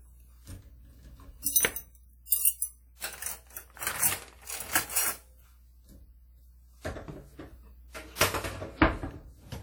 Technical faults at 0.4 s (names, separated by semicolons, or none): WMA compression